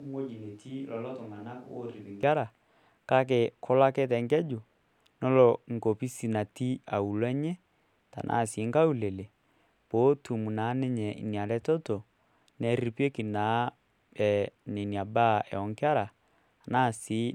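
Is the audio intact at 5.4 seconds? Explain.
Yes, the speech at 5.4 seconds is intact, with no dropout, glitch or other fault at that moment.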